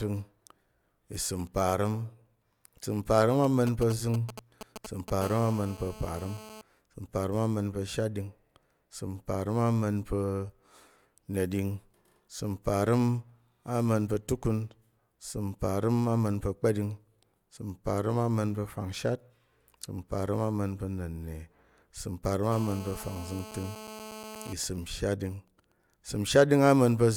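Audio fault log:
3.44–5.10 s, GSM signalling bursts: Right after "isəm parəm", a galloping dit-dit-dit of ticks and brief 217 Hz buzzes appears, fairly loud at roughly 10 dB below the speech. A nearby 2G phone is exchanging short groups of radio bursts with the network, and the audio circuitry rectifies them. Broken into clusters like this, it is clearly not a continuous buzz.
5.22–6.61 s, GSM phone buzz: The pattern turns into an unbroken, hard, raspy buzz at 217 Hz with a dense stack of harmonics, about 17 dB below the speech and unrelated to it. The phone is now in a call and transmitting continuously at 217 bursts per second. It is a steady tone rather than galloping clusters.
22.52–24.53 s, GSM phone buzz: The same steady 217 Hz rasp returns for about two seconds, at about 15 dB below the speech. This is again continuous in-call transmission being rectified. Its unbroken, even texture marks it as the call buzz and not signalling.
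24.64–25.72 s, GSM signalling bursts: The buzz falls back to even ticks with a longer buzz twice a second, now faint, far below the speech. The phone's user has gone silent during the call, so it sends only occasional burst groups. The result is the intermittent ticking pattern instead of a constant tone.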